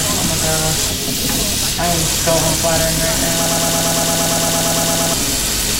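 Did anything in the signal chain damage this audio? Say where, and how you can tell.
Yes. From 3.46 s to 5.14 s there is a broken-record loop: a 114 ms fragment repeats back to back about 15 times, and the audio that belonged in that span never arrives. The likely cause is a player, encoder or stream buffer that stalled and kept resending its last block. On a waveform the same short shape tiles exactly, and a spectrogram shows an identical pattern stamped every 0.11 s, like a comb of copies.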